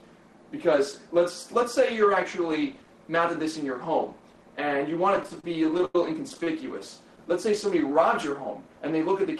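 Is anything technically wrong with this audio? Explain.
Yes. From 5.16 to 6.47 s there are repeated stalls (stutter): packets arrived late, the jitter buffer repeatedly ran dry, and the receiver stretched the last sound, so the audio drags in short hitches, the longest about 93 ms.

From 7.46 to 8.00 s a jitter buffer slow-down repeats pitch periods to rebuild its reserve. The audio plays at about 91% speed, adding roughly 53 ms at unchanged pitch.

Both ride on a call-codec path whose band limit near 12 kHz cuts off the high frequencies.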